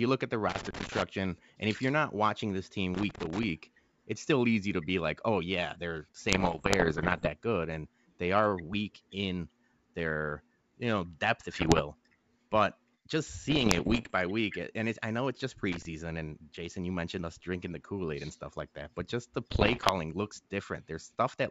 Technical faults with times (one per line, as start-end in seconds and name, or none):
0.49-1.02 loose connector crackle
2.95-3.46 loose connector crackle
6.28-7.30 bit errors on an ADPCM link
11.54-11.82 bit errors on an ADPCM link
13.50-14.12 bit errors on an ADPCM link
15.72-15.85 loose connector crackle
19.50-19.91 bit errors on an ADPCM link